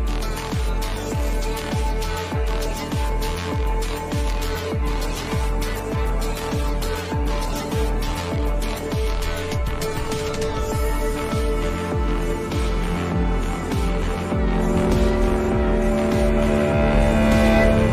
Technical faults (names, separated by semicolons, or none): adaptive stream at a lower bitrate